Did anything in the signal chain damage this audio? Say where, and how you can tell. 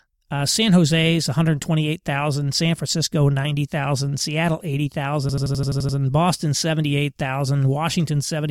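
Yes. A system hang loop at the driver or buffer stage runs from 5.29 to 5.97 s: one 85 ms slice of speech repeats exactly eight times at 11.7 Hz, a machine-gun stutter. The driver froze while hardware kept replaying its ring buffer, consistent with a 4096-sample buffer.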